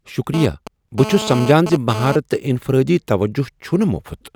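From 0.34 to 2.16 s, GSM phone buzz intrudes. A nearby 2G phone's data bursts get rectified, giving a harsh, raspy 217 Hz buzz, about 9 dB below the speech.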